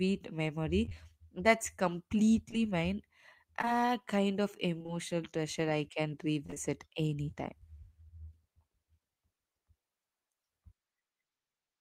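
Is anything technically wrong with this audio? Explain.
Yes, there are some network dropouts in this speech. Short concealed packet loss hits at 0.85, 0.89, 2.51, 3.62 and 3.65 s, the last just before "kind of". Each time about 20 ms never arrived and the decoder extended the previous sound to bridge it, giving brief smears or wobbles.

Repeated packet loss shows up at 4.78–4.90 s, between "kind of" and "treasure I can", and again at 6.46–6.58 s, right after "treasure I can". Three quick holes in each stretch mean roughly half of it is patched-in sound, so it comes out choppy with pieces missing.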